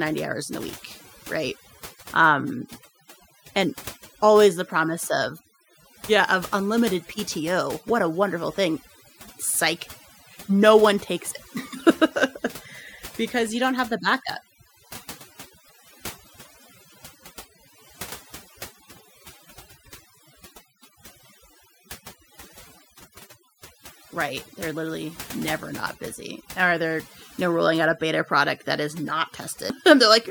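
From start to finish the speech carries overdone noise removal. A noise reduction stage was driven too hard, so any frequency band sitting close to its noise estimate gets pulled far down or switched off entirely, and the softer components of the voice are removed along with the hiss. Between phrases the background drops and breaks up into twinkling specks, while the voice itself lacks its quieter detail.

At 29.69 s there is a CD skip. A physical knock or a flaw on the disc made the laser jump to a different turn of the spiral track. Playback mutes for a very short moment, only a few milliseconds, then resumes from another position on the disc. It is heard as a small tick followed by an abrupt discontinuity in the speech, where the audio jumps by a whole number of disc revolutions.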